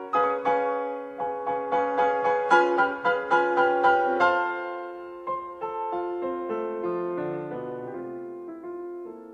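No technical fault can be heard at any point in this audio.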